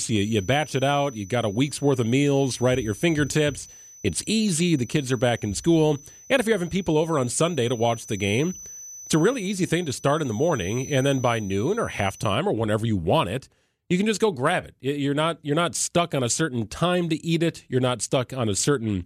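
A loudspeaker-to-microphone loop most likely sat right at the edge of feedback from 0.00 to 12.40 s, holding one frequency, near 6 kHz, in a steady ring that never ran away. This feedback whistle is heard as a thin, high tone behind the speech, roughly 20 dB below it, swelling and fading slowly in level, and it stops just before "or whenever you want".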